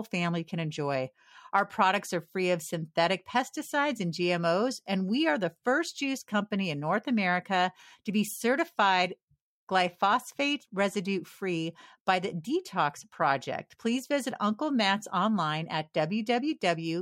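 Nothing in this speech recording stood out as a technical problem on listening.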